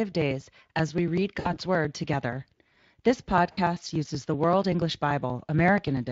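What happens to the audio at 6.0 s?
Right around 6.0 s you're hearing the tail end of the periodic USB or driver dropouts, which run from 0.12 s to 6.07 s. Every 0.096 s a background task stalls the audio path and a few milliseconds of signal, roughly 4 ms, just get skipped rather than padded with silence. That makes a steady ticking or popping about ten times a second, riding on the speech, and at 6.0 s you're catching one of the last of them.

Underneath that, the Speex codec is at work the whole way through, including this moment. The damage is plainly audible, with a hoarse, grainy quality to the speech where the excitation is starved of bits. Anything above 8 kHz is only a shaped noise fill rather than real detail. It runs at about 20.6 kbps.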